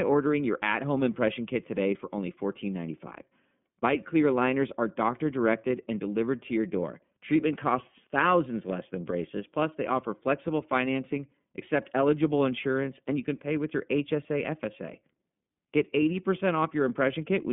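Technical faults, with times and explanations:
Throughout: iLBC codec. The sound is squeezed into a narrow telephone band, roughly 150 Hz to 3.5 kHz, and nothing at all comes through above 3.7 kHz. The speech stays clear but sounds plainly rough and synthetic. Each short block is coded on its own, with no help from the one before. The roughness fits 30 ms frames at a rate near 13.33 kbps.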